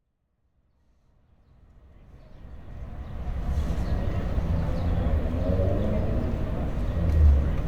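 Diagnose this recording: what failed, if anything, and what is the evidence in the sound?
Nothing stood out on listening to this recording of everyday sound, and the smooth fade in from the very start up to full level at 3.7 s is gradual, with no click or hard edge.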